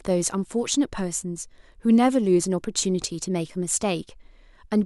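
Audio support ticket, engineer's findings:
Overlapping chunks in the processing or transport stage: each 2.0 s chunk begins before the previous one ends, so about 13 ms of speech is replayed at the join. Heard as a brief click or stutter at 1.52 s.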